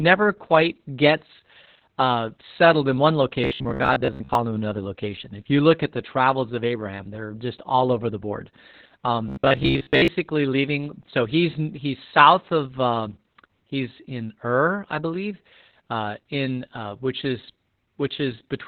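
Opus voice compression at 8 kbps in SILK narrowband mode runs through the whole clip, leaving the speech muffled and hoarse. A spectrogram shows a flat ceiling with nothing above 4 kHz.

From 3.44 to 4.35 s, between "uh settled in one" and "him to another location", and again from 9.29 to 10.08 s, the speech becomes a rigid metallic buzz at 66.8 Hz. This is likely robotic sound from repeated short buffers of about 15 ms. About half of the first stretch and most of the second are repeats. They show as evenly spaced vertical striations and as a waveform of repeated copied cycles.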